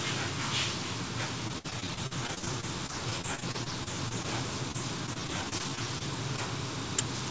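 From 1.48 to 4.26 s, and again from 4.72 to 6.39 s, repeated packet loss makes the sound choppy and robotic. Gaps of up to 58 ms are filled by stretching earlier sound. The spectrogram shows smeared, repeated blocks and brief holes below the call path's 8 kHz ceiling.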